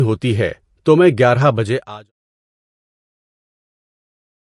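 A short speech recording with plainly audible MP3 compression damage. It sounds watery and swirly, and nothing remains above 11.3 kHz, which fits a likely low bitrate around 48 kbps.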